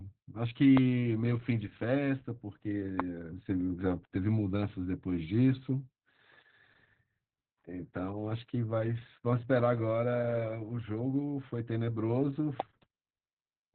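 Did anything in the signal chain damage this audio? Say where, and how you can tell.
Yes. The speech sounds muffled, hoarse and slightly robotic throughout, with nothing above 4.3 kHz. This is heavy Opus voice compression at the codec stage: narrowband SILK coding that points to a bitrate around 8 kbps.

A single loud pop at 12.6 s stands about 15 dB above the speech, which carries on underneath. It is likely a voltage spike in the analogue wiring or driver.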